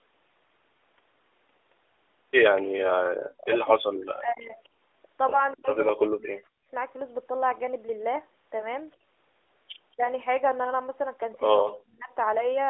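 Speech over an AMR narrowband mobile call, band-limited to roughly 300 Hz to 3.6 kHz, has lost AMR speech frames from 5.30 to 5.42 s. The decoder briefly repeats the last good pitch and vocal-tract settings, producing a short dip or warble, consistent with a single lost 20 ms frame. A spectrogram shows frozen, fading harmonics there, and the waveform shows a small amplitude dip.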